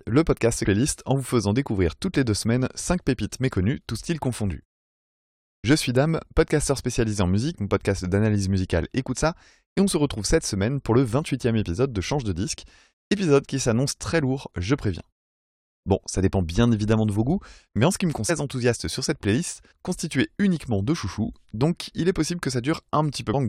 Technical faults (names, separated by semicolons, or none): damaged data in a compressed stream